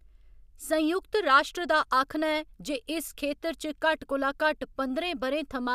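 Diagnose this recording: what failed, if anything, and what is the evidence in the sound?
Nothing failed: across the whole speech recording, no stage of the chain from wiring to playback leaves any audible evidence of a fault.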